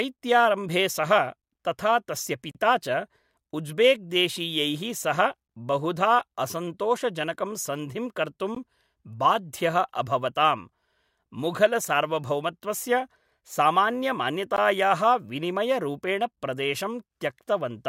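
Brief gaps cut the speech at 2.51–2.55 s, 8.55 s and 14.56 s. These are gaps at joins of encoded pieces, where untrimmed encoder delay and padding remain.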